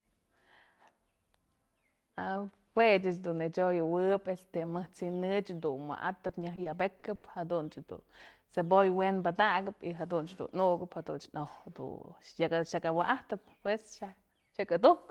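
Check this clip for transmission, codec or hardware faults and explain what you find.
There is one transmission fault. From 6.27 to 7.26 s, repeated packet loss (robotic sound) occurs: six gaps, the longest 80 ms, were each patched by extending the last audio received, so the speech sounds choppy, with pieces missing.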